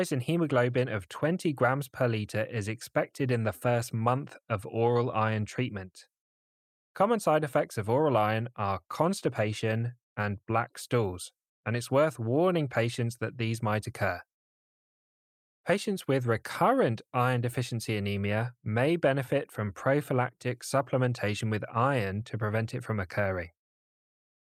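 No technical faults can be heard anywhere in this speech recording.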